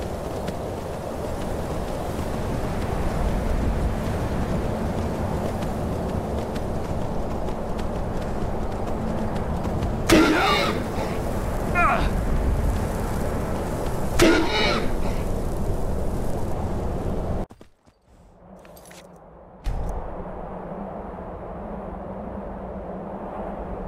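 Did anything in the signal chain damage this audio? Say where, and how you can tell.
Yes. Between 9.58 and 11.51 s the sample-rate conversion stage does crude rate conversion, which fits a 44.1 kHz to 48 kHz change done by simply repeating the nearest sample. That leaves a gritty, inharmonic fizz riding on the louder and brighter parts of the sound, roughly 25 dB below the signal. Unlike clipping distortion, the added tones aren't harmonics of the source, and unlike codec artefacts they don't swirl or smear but buzz steadily in a repeating pattern.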